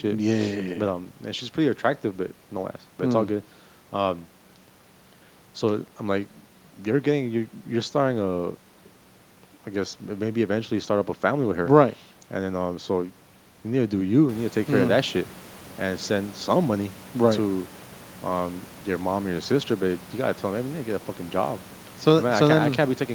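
The speech signal carries no technical faults, with the room's background noise sitting about 42 dB below the speech until around 14.5 s, where it rises by about 11 dB to sit about 22 dB below, a change in the room itself rather than in the recording chain.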